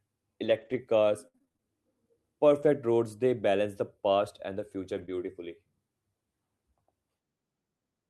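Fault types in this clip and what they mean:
Repeated packet loss (robotic sound): from 0.45 to 1.62 s, eight short gaps up to 62 ms are patched by repeating sound, giving choppy, robotic audio with smeared, looping harmonics on a spectrogram.
Lost packet rebuilt from error correction: at 2.62–2.68, 4.94–5.04 and 5.10–5.12 s, low-bitrate copies fill the holes without a break in the waveform, but those spans look grainier and sound rougher.
Short concealed packet loss: at 5.06–5.10 s, a 20 ms hole is bridged by continuing the previous sound, heard as a brief smear and seen as a stretched, blurred slice on the spectrogram.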